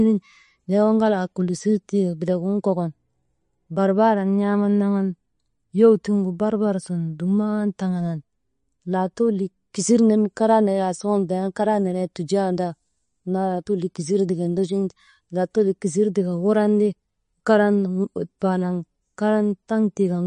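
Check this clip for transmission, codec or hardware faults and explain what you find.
One codec fault runs through the whole recording. The speech is likely damaged by MP3 compression, and the damage is plainly audible. There is no content above about 10.6 kHz. The treble stops at a fixed point, which fits a low bitrate near 40 kbps. Short of bits, the encoder drops the top band and zeroes weak frequency lines. Those lines flicker on and off between frames. The result is a watery, swirling texture with smeared attacks.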